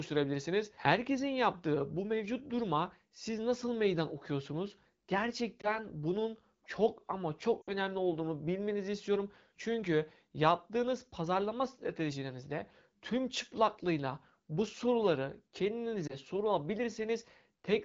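Brief dips and warbles interrupt the speech at 5.62 to 5.79 s, just before "bunun çok ama", and at 16.07 to 16.15 s. Each sounds like a single 20 ms frame of lost AMR speech frames. At 7.62 to 7.70 s, between "bunun çok ama" and "olduğunu bilmenizi istiyorum", a longer stretch that drops to near silence points to about 60 ms lost. Radio errors failed the frame checksums, so the AMR-WB decoder repeated the last good pitch and vocal tract settings at falling gain.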